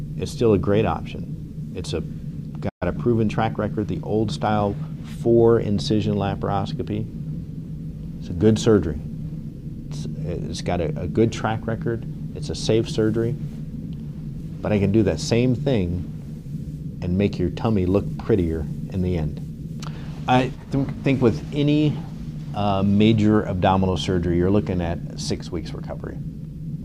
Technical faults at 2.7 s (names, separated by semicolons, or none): playback stall